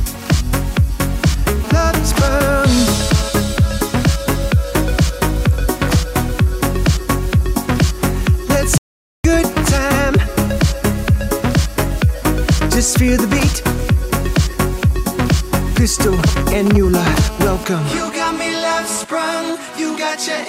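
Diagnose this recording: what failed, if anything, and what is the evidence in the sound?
A nearby 2G handset in a call is coupling into the analogue wiring, where the circuit rectifies its radio pulses. The result is GSM phone buzz: a hard, raspy 217 Hz tone rich in harmonics from 1.64 to 3.29 s and 16.95 to 19.05 s, at about 13 and 14 dB below the signal.

An audio dropout to silence runs from 8.78 to 9.25 s, about 468 ms. The input stage most likely lost its source through a disconnect, failed link or mute, while writing continued. The sound stops abruptly into silence with no room tone, and that stretch of audio is gone.

GSM signalling bursts appear from 16.19 to 16.77 s. A nearby handset, not yet in a sustained transmission, sends short groups of bursts that the analogue wiring rectifies. This produces a galloping dit-dit-dit of brief 217 Hz buzzes, only around 5 dB below the signal.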